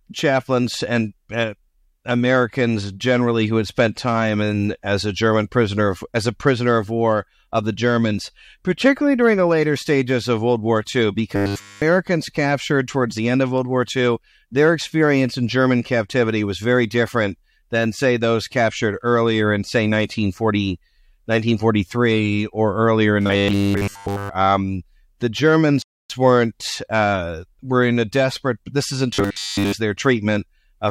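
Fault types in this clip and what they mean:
Robotic sound from repeated short buffers: audio likely arrived too slowly, so 10 ms chunks looped, giving a rigid 100 Hz buzz around 11.4, 23.2 and 29.1 seconds.
Rebuffering stall: the player ran dry at 25.82 seconds, going silent for about 275 ms before picking up cleanly at "weren't uh were in".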